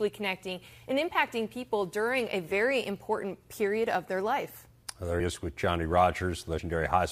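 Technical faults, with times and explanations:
5.19 s and 6.57 s, compressed frames skipped: the speech jumps forward with a short smeared blip instead of a sharp click, losing about 70 ms and then about 50 ms. Roughly three and then two whole compressed frames were dropped, consistent with frames of about 26 ms. Overlapping neighbouring frames blur each join.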